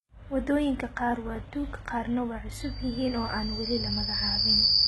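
Throughout the speech, sibilants sound gritty and metallic, and nothing reaches above 11.8 kHz. This is likely heavy HE-AAC compression: the treble is rebuilt by copying lower bands upward, and the level of damage fits a very low bitrate near 16 kbps.

From 2.56 s to the end, a pure 4.8 kHz tone swells over roughly two seconds to sit about 10 dB above the speech. This is a loudspeaker feedback squeal, where the microphone hears its own loudspeaker and the loop gain exceeds one at that frequency.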